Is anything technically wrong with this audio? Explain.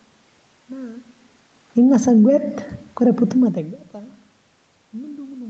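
Yes, there is one fault. From 1.63 to 2.28 s the automatic gain is falling. The gain control judged the input too loud, or its background noise too strong, and pulled its gain down by about 4 dB over that stretch. The speech sinks, and the room noise sinks with it. The level change near 1.5 s is the talker moving, not the system.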